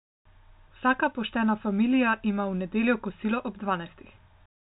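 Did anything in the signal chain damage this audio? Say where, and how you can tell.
No, nothing in the signal chain damaged this audio.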